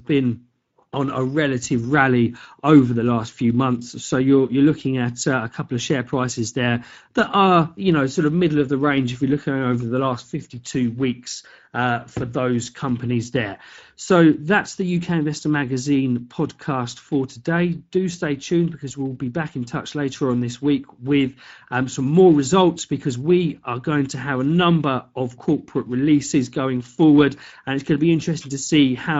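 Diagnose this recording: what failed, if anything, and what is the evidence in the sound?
Speex codec damage runs throughout the speech, introduced at the codec stage. The voice sounds plainly hoarse and noisy, with a gritty edge, which fits a mid-level Speex setting of about 16.8 kbps. There are too few bits to code the CELP excitation accurately.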